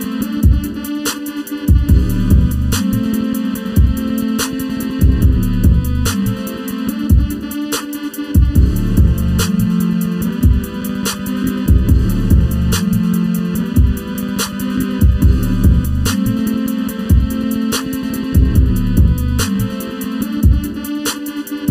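Throughout the audio there is channel delay (comb filtering): one channel arrives late by less than a millisecond, and when the two are summed to mono, the shared content cancels at regularly spaced frequencies. The first notch sits around 700 Hz, with further dips repeating upward from there, giving a hollow, phasey colour. The notches stay fixed for the whole clip, which rules out a flanger or phaser, whose notches sweep.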